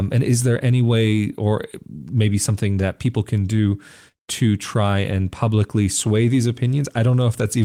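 A speech recording carries clock drift between sender and receiver for its whole length: the sending side's clock runs roughly 3 percent slow, so samples arrive a little later than the receiving side consumes them. The jitter buffer therefore keeps draining, and the receiver must make up the shortfall. Unlike packet loss, this doesn't produce isolated dropouts with damaged fragments. Instead there is a steady, one-directional timing pressure that never lets up. The result is repeated timing corrections from 0.43 s to 7.65 s, where the receiver stretches or repeats short slices of audio to stay in step. Delivery runs at about 97 percent speed and about 0.2 s is added over that span. Each individual edit is small and the spacing is uneven, so the effect comes across as faint hiccups and a slightly dragging, unsteady pace. All the corrections lean the same way, lengthening rather than cutting. 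That consistent direction is what separates them from ordinary network jitter, whose glitches go both ways at random.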